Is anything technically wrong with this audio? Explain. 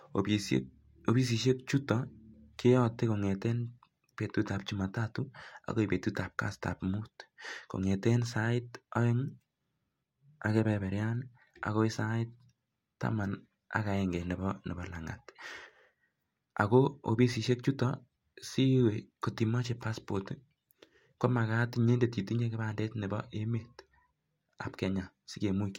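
No, nothing in the signal points to a technical fault, as the speech comes across intact with no audible defect anywhere in the recording.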